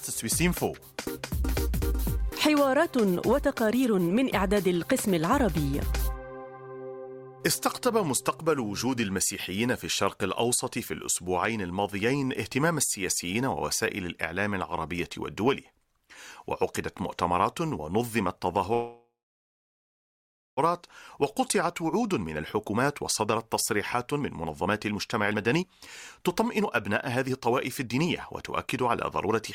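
A call audio freeze runs from 18.73 to 20.59 s: the last sound is stretched into a fading buzz, then about 1.47 s of silence, likely because delayed packets emptied the jitter buffer, inserting a gap without losing anything. Jitter buffer speed-up follows at 21.39 to 25.64 s and again at 26.18 to 29.42 s. The receiver trims short pitch-period slices to shed the built-up delay, roughly 0.7 s and 0.5 s. The audio plays about 14% faster at unchanged pitch and sounds hurried.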